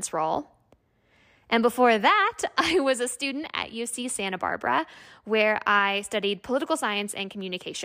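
Nothing in this bit of speech trips the ear at any point, so there's honestly nothing here to flag.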